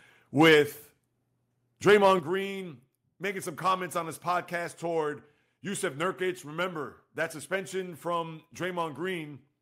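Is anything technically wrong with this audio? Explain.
Yes. There are two rounds of microphone overload, each followed by the microphone volume being stepped down.

Microphone overload at 0.40–0.56 s and 1.88–2.13 s: peaks run about 4 dB and about 2 dB past the converter's limit, so their tops are flattened. That gives a harsh crackle on the loudest syllables, roughly a tenth of the samples in the first burst and a twentieth in the second. Unlike codec distortion, it tracks loudness. The likely cause is input volume set too high.

Microphone volume stepped down at 0.54 s and 2.19 s: speech and background drop together, by about 3 dB and then about 8 dB. This is likely the call software cutting input volume after the distorted peaks. It is a single sudden step, unlike a compressor's gradual pumping.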